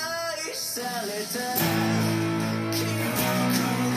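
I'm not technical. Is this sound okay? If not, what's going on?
Yes, it sounds fine; nothing here needs fixing.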